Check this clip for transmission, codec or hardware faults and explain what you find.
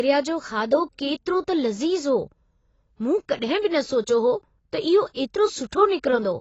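There is one fault, present for the whole clip. The speech sounds dull and smeared, with a warbling, fizzy texture on sibilants and held sounds, and nothing reaches above about 7.9 kHz. This is likely AAC compression at a low bitrate, consistent with around 24 kbps AAC-LC. Short of bits, the encoder lowers its cut-off and coarsely quantises or fills the remaining bands, so fine high-frequency detail is replaced by unstable, noisy approximation.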